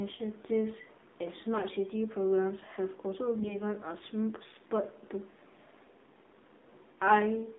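Throughout, the AMR narrowband mobile codec confines the speech to a band of roughly 200 Hz to 3.7 kHz, with a steady buzzy, synthetic timbre that fits the 7.4 kbps mode. At 1.54 to 1.65 s and 3.40 to 3.59 s, AMR bit errors misplace excitation pulses across what sounds like about five frames each. The speech turns briefly hoarse and gargly but keeps its pitch and level, unlike a dropout or gap.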